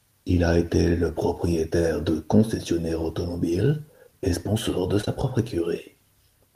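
It's a speech clip with two back-to-back bits of short concealed packet loss right after "automobile et sponsor de", at 5.01 to 5.05 s and 5.05 to 5.08 s. Roughly 20 ms of audio went missing each time, and the receiver papered over it by extending the preceding sound, so you get a quick smear there.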